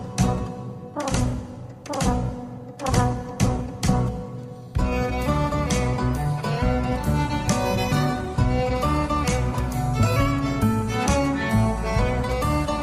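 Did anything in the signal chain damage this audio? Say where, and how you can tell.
No, nothing along the chain seems to have harmed this one, so there's nothing I'd point to at any stage.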